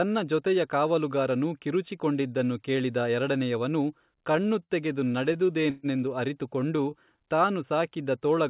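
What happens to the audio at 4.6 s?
At 4.6 s the speech is inside a stretch of repeated stalls (stutter), 4.16 to 4.73 s, just after "ಕಿರುಚಿ ಕೊಂಡಿದನ್ನು ಕೇಳಿದ ಎರಡನೆಯವನು". Late packets emptied the jitter buffer six times, and the receiver extended the last sound to fill each wait, up to 71 ms. Nothing is lost, but the speech drags and stutters.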